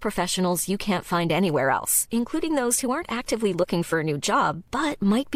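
No technical faults can be heard anywhere in this speech.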